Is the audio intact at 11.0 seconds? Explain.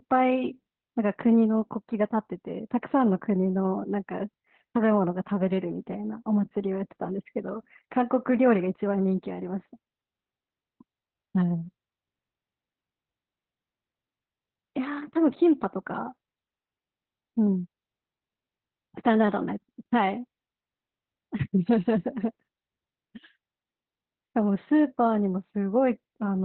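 No, Opus voice compression runs through the whole clip, 11.0 s included: narrowband SILK coding cuts everything above 4.2 kHz, so the speech sounds muffled, hoarse and slightly robotic, as you'd expect at roughly 8 kbps.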